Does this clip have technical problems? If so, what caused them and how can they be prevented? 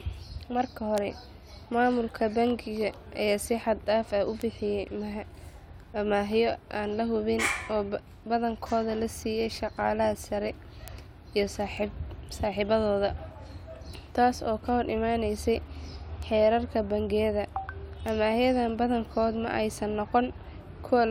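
Yes. Bit error spikes: single flipped bits in memory or on a digital link threw one to three samples to a wrong value at 0.98, 4.42, 10.88, 11.77, 16.23 and 18.09 s. Each is a sharp broadband tick, peaking at about −24 to −12 dBFS, unrelated to the speech. Error-checked links, ECC memory and stable digital clocking prevent this.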